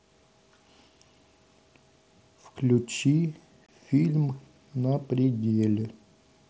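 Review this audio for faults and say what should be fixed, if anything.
At 3.66 to 3.69 s there's a sharp-edged gap of about 22 ms. It's unconcealed Bluetooth headset packet loss, where dropped voice packets, which fits three mSBC frames, were simply replaced by silence or an idle pattern. Keep the headset closer to the phone and turn on packet loss concealment so the gaps get filled.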